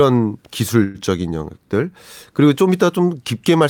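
At 0.83 to 0.98 s there's a call audio freeze: the last sound gets stretched into a brief fading buzz for about 112 ms, likely from delayed packets draining the jitter buffer, then the speech resumes intact but that much later.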